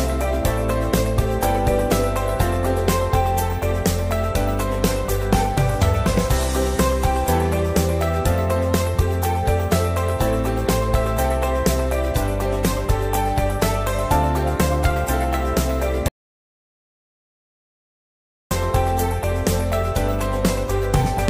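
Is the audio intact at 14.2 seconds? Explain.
Yes, at 14.2 seconds the audio plays through intact, with no dropout, click, distortion or other fault at that point.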